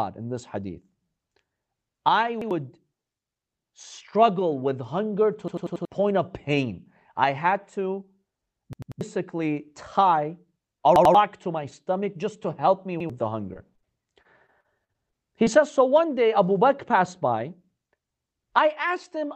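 A hard-edged stutter interrupts the speech five times: at 2.42 s, 5.48 s, 8.73 s, 10.96 s and 13.00 s. It is a repeated buffer. When fresh audio arrived late, the device replayed its last block of about 93 ms, which fits a 4096-sample buffer. The block sounds twice at 2.42 s and 13.00 s, three times at 10.96 s, four times at 8.73 s and five times at 5.48 s, so several hundred milliseconds of real speech are lost in the worst case.

Shortly after, at 13.53 s, 13.75 s and 13.80 s, there are quick smears. Each is a short concealed packet loss: between 20 and 40 ms of audio failed to reach the decoder, so the receiver extended the preceding sound and then blended back into the real signal.

At 13.55–13.57 s, a single 20 ms stretch sounds rougher and noisier. That packet was lost, but a lost packet rebuilt from error correction replaced it, using the low-bitrate copy carried in the next Opus packet. 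Because of that copy, there is no gap.

From 14.22 to 15.48 s, the speech turns choppy. This is repeated packet loss with its typical robotic sound. Seven separate holes, the longest about 43 ms, were each patched by continuing the last sound, so about 14 percent of this stretch is concealment rather than real audio. Throughout the clip, the Opus call path at 40 kbps limits the top end to about 8 kHz.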